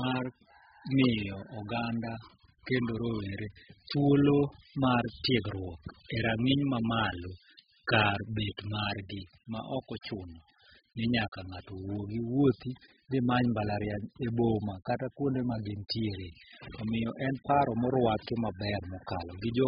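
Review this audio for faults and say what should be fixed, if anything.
The speech is heavily damaged by what is likely AAC compression, and it lasts the whole clip. Nothing is heard above 5 kHz, so the sound is dull and muffled. Sibilants lose their edge and take on a fizzy, smeared texture. Sustained sounds warble. The encoder keeps only the parts of the spectrum it judges most audible and discards the rest. That fits AAC-LC run at a very low bitrate, around 8 kbps. To prevent it, re-encode from the original source at a much higher bitrate.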